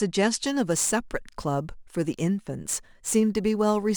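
From 0.46 s to the end, a fine hiss and roughness rides on the speech, strongest on loud and bright sounds and gone in pauses. This is sample clock jitter: the converter's clock wanders by a few microseconds, leaving errors roughly 25 dB below the speech.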